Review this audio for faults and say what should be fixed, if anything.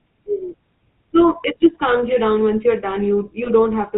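The whole clip runs through the GSM full-rate codec, and the damage is plainly audible. That codec models the vocal tract and excites it with a sparse, regularly spaced pulse train, so the speech picks up a buzzy, gravelly edge, and nothing above 4 kHz survives, which takes the air and crispness out of the consonants. The overall character fits a 13 kbps full-rate GSM link. To avoid it, capture or route the call over a wideband codec such as AMR-WB or Opus instead of legacy full-rate GSM.

There are also two spots of lost GSM frames, at 1.42 to 1.45 s, right before "just calms you down", and at 3.44 to 3.50 s. Each sounds like about 20 ms of missing audio, consistent with a single dropped frame. The decoder fills the gap by reusing the last good frame's parameters, so instead of a clean dropout you hear a brief rough, metallic ring smeared over that moment. To prevent this, fix the radio or transport path dropping the frames, or use a codec with better loss concealment or redundancy.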